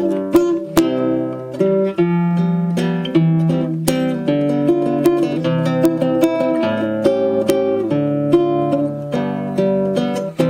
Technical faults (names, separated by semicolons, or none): integer overflow